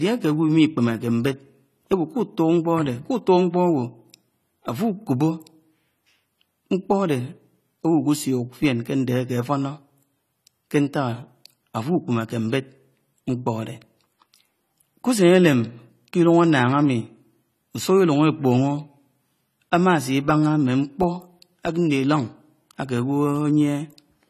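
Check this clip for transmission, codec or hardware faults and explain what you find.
AAC compression is present throughout the speech. A low-rate AAC-LC encode, likely around 32 kbps, quantised the spectrum coarsely, leaving nothing above 14 kHz and audible dullness, smearing and fizzy sibilants.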